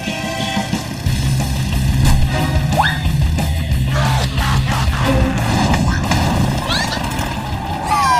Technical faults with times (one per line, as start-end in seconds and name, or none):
none